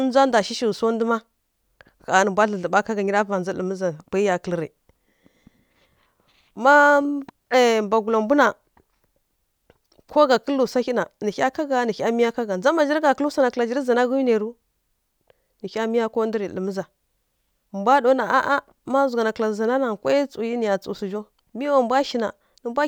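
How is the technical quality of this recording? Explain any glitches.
The technical quality of this recording is sound, with no glitches to explain.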